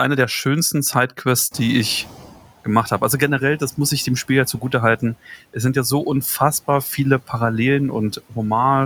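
Around 1.5 s the room noise jumps, and the noise suppressor catches up late: from 1.51 to 2.41 s the noise leaks through, then sinks by about 11 dB.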